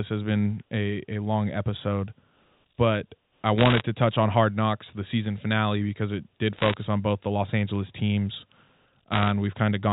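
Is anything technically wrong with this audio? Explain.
Yes. Three bursts of bit errors on a digital phone line crackle over the speech at 3.58–3.82 s, 6.56–6.74 s and 9.12–9.30 s. Roughly one to one and a half bits in a hundred are flipped, and each flipped high-order bit, or flipped sign of a loud sample, throws one sample far off, giving a sharp tick. On a waveform these appear as isolated single-sample spikes. On a spectrogram they show as thin vertical streaks spanning the whole band, which stops at 4 kHz because of the G.711 telephone coding.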